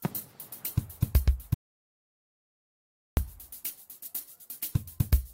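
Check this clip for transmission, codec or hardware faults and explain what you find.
There's one clear fault, an audio dropout to silence from 1.54 s to 3.17 s. The sound cuts out mid-flow and you get about 1.6 s of dead silence, no room tone at all, then it snaps back. Likely the input was lost while the recorder kept writing.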